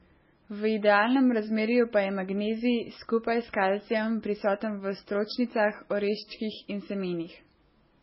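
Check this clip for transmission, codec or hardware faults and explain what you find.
One codec fault runs through the whole clip. The speech sounds watery and swirly from start to finish, s sounds turn metallic, and nothing comes through above 5.6 kHz. The likely cause is heavy MP3 compression. Starved of bits, the encoder chops the treble and flickers weak frequency lines on and off between frames, which fits a bitrate near 16 kbps.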